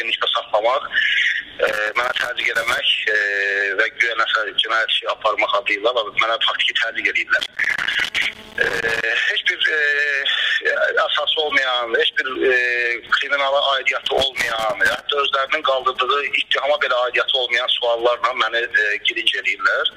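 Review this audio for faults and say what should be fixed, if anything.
Loose connector crackle appears at 1.67–2.79 s, 7.39–9.03 s and 14.06–15.01 s: a worn or dirty contact intermittently breaks the signal path, producing irregular scratching bursts. Clean or replace the affected connector and secure the cable against movement.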